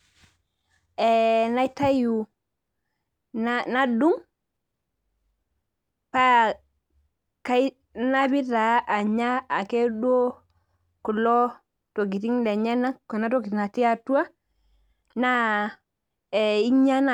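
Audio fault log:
No faults detected in the speech audio.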